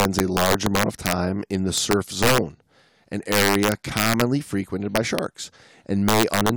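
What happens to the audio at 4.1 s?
At 4.1 s the speech is inside a stretch of integer overflow running from about 3.32 to 4.21 s. The signal is driven roughly 6 dB past the largest value the integer format can hold, and instead of being limited, each peak wraps around to the opposite sign and jumps across the full range. That produces violent, snapping cracks on the louder parts, far harsher and more abrupt than clipping, which only flattens peaks into a fuzzy buzz.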